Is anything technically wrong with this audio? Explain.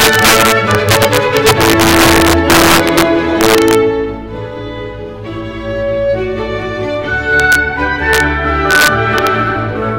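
Yes. Integer overflow at 0.00–3.02 s, 3.41–3.75 s, 7.40–7.55 s, 8.13–8.20 s and 8.71–9.27 s. Peaks driven about 1 to 8 dB past full scale wrap to the opposite sign instead of being limited, producing violent cracks far harsher than clipping, worst in the opening three seconds.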